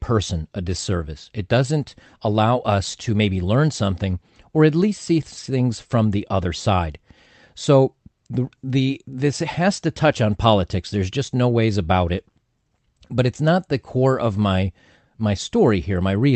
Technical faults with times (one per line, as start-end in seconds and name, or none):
none